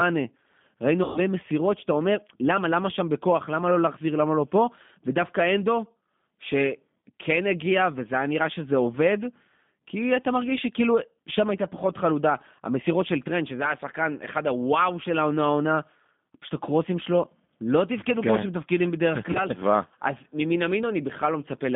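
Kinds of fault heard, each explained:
G.729 codec: a low-bitrate speech coder rebuilding the voice from filter and pulse models, heard as rough, synthetic speech rather than plain telephone band-limiting to 150 Hz–3.6 kHz.
VoIP packet loss concealment by the speech codec: the decoder extrapolates lost stretches, heard near 1.0, 7.0, 17.5 and 19.3 s as buzzy, fading smears rather than silent dropouts.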